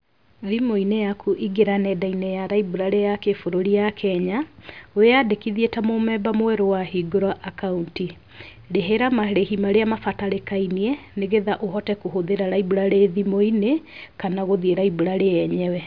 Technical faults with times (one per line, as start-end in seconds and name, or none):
none